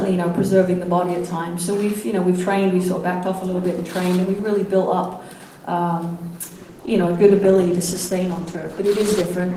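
From 6.41 s to the end, a call bitrate drop coarsens the encoding. The sound turns rough and muffled, which fits a fall from 48 to 13 kbps.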